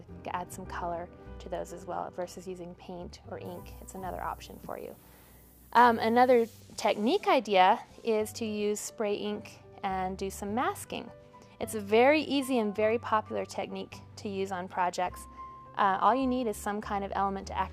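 From 3.45 to 6.60 s the audio drops to low bit depth with noise shaping: only 9 bits, with rounding error pushed upward. A thin hiss, about 25 dB below the signal, appears; a spectrogram shows a floor brightening sharply toward the top band.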